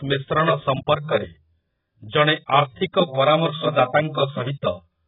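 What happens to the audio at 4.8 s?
At 4.8 s the speech is still dull and smeared, as it is for the whole clip. Nothing comes through above about 3.8 kHz. Sibilants turn fizzy and vowels warble. The likely cause is heavy AAC compression, AAC-LC at a very low rate, which fits about 8 kbps. At that rate the encoder lowers its cut-off and quantises each frame coarsely. Whole bands drop out or are replaced with substitute noise.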